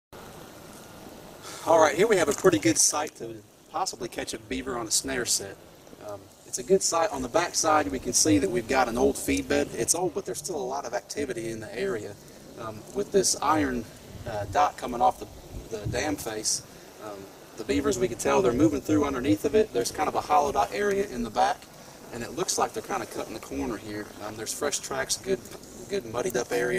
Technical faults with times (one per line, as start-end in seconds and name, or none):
0.00-26.79 overlap-add ripple